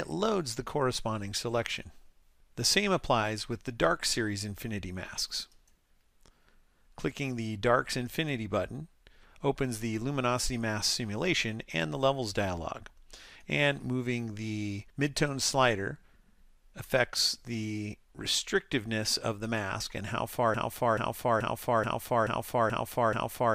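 From 20.54 s to the end, one 0.43 s fragment repeats exactly seven times back to back, a broken-record loop, likely from a stalled player, encoder or stream.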